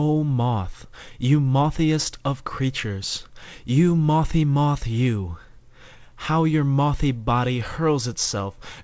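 Nothing goes wrong anywhere in this one; the sound simply has nothing above 8 kHz, which fits an ordinary wideband call codec doing its usual job.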